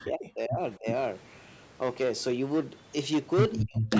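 Hard clipping runs through the whole speech clip. The signal is driven about 13 dB past what a stage could pass, so around one sample in twenty is flattened. Every loud syllable carries a harsh, buzzy fuzz, and the flat tops spray harmonics up to the 8 kHz band edge of the call path.

From 0.0 to 0.86 s the speech dips sharply, by as much as about 40 dB across roughly 0.7 s in total. This is likely speech suppressed in double talk: with both ends active, the echo canceller could not tell this talker from loudspeaker echo and attenuated both. A second stretch from 3.63 to 3.93 s drops out the same way for about 0.3 s.

At 0.87 to 0.96 s a copy of earlier speech appears 351 ms behind the original, about 5 dB below it. This is likely echo leak: residual loudspeaker pickup got past the echo canceller and was sent back. It returns at 3.95 s, now about 5 dB above the speech, and persists to the end.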